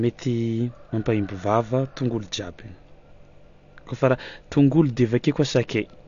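Speech, dulled throughout with nothing above 7 kHz and a fizzy, warbling smear on sibilants, likely AAC compression at a bitrate near 32 kbps. That swirling texture sets it apart from a clean low-pass filter.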